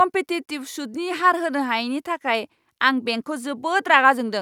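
Nothing stood out as a technical fault on listening to this speech recording.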